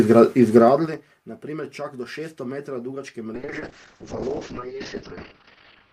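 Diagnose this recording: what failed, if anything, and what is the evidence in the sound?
Zipper noise between 0.60 and 1.02 s, from a gain stage in the processing chain that applies a level change without smoothing. The level falls by about 20 dB in discrete 4 dB jumps, roughly ten per second, and each jump leaves a small click riding on the sound. On a waveform the envelope descends as a staircase. A spectrogram shows faint vertical broadband ticks at each step boundary.

Call bitrate drop from 3.35 s to the end, at the codec stage, driven by the network's bandwidth estimate. The encoder falls from 64 kbps to 7 kbps and stays at the floor for 1.92 s. At that rate, content above 6 kHz is cut where it previously reached 20 kHz, so the sound turns muffled and rough. A spectrogram shows a hard horizontal ceiling at 6 kHz, with smeared, blocky texture beneath it.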